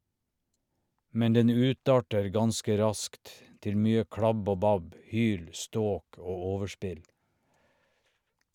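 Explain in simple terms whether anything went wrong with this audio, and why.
Nothing went wrong with this audio, because no faults can be heard anywhere in the recording.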